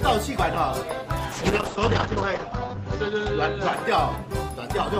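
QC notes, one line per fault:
1.33–4.29 s, call bitrate drop: the audio turns coarse and muffled, the top end collapsing to roughly 8 kHz where it previously extended to about 20 kHz. The encoder was forced to a much lower rate, and the sound points to a fall from about 32 kbps to about 8 kbps. At that rate the coder quantises coarsely and discards high frequencies, producing the rough, watery texture that is worst for about 1.15 s before quality climbs back.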